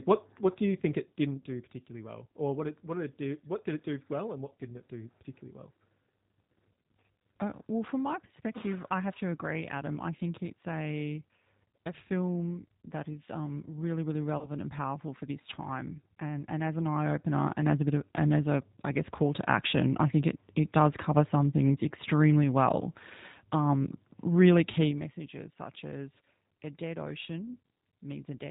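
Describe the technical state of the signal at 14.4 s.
Right around 14.4 s there's VoIP packet loss concealed by the speech codec, running from 14.38 to 14.51 s, just after "is um really really" and before "and powerful for this". The gap sounds like about 30 ms of missing audio, which fits a single lost packet. The decoder fills it by carrying forward its last pitch and vocal-tract filter while the gain drops, so you get a short, smeared stretch that fades. It doesn't snap back cleanly because each frame is rebuilt from the one before, so the sound stays a bit weak and distorted until about 14.51 s.

Underneath that, the whole clip has the plainly audible character of the G.729 codec, and the band limit and texture point to 8 kbit/s G.729A. Nothing comes through above 4 kHz. The speech is rebuilt from a filter, a pitch predictor and a few pulses per frame, which gives it that slightly rough, synthetic grain right through the concealed stretch.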